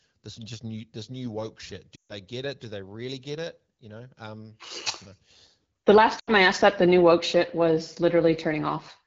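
A speech clip where the sound drops to near silence at 1.96–2.12 s and again at 6.19–6.32 s. These are lost AMR speech frames: about 140 ms and then 80 ms of concealment, during which the wideband decoder repeats its last settings while fading.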